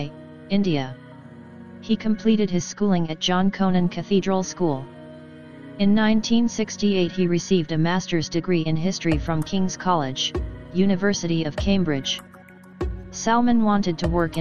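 No technical faults are audible.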